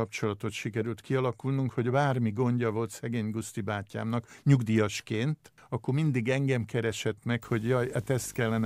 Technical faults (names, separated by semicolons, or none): video or display buzz